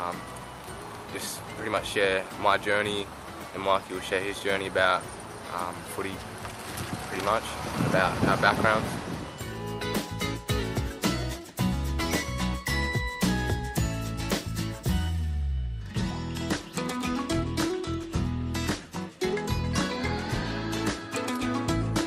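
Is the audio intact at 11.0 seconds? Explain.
Yes, the audio is intact at 11.0 seconds, with no fault audible at that moment.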